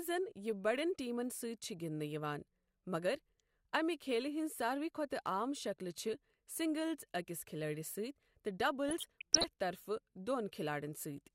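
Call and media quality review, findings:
DAB burbling, 8.89–9.44 s: weak reception lets bit errors, around half a percent, past error correction into MP2 samples and scale factors. Sub-bands jump frame by frame, causing burbling across 23 frames of the speech.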